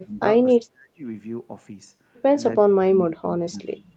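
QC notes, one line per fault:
0.00–0.22 s, 0.57–1.03 s and 2.64–3.80 s, speech suppressed in double talk: the speech sinks sharply, by about 30 to 35 dB at its deepest, most extensively in the last stretch. This is likely an echo canceller ducking the talker while the far side also spoke.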